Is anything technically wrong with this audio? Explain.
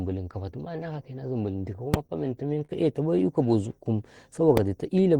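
Yes, there are two kinds of fault in this speech clip, each occurring twice.

Invalid numbers at full scale occur at 1.94 s and at 4.57 s. A calculation produced infinite or invalid values, which were forced to the maximum sample value for one processing block. The first lasts about 2.9 ms, which fits a 128-sample block. The second lasts about 0.73 ms, which fits a 32-sample block. Both are too brief to separate into an onset and release pop, so each is heard as a single sharp bang.

Short stalls from a late packet occur from 2.07 to 2.11 s and from 2.65 to 2.71 s. In each case a packet missed its deadline, the jitter buffer emptied, and the receiver kept stretching the last sound until the data arrived. It then resumed exactly where it left off. The first stall holds the sound for 25 ms and the second for 40 ms, with nothing lost. Each is heard as a briefly frozen sound with a faint buzz or dip.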